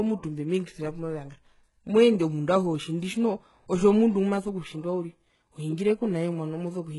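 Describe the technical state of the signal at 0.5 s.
At 0.5 s, likely HE-AAC compression runs through the speech: treble is rebuilt from copied lower bands, so sibilants sound gritty and lispy, with nothing above 11.5 kHz.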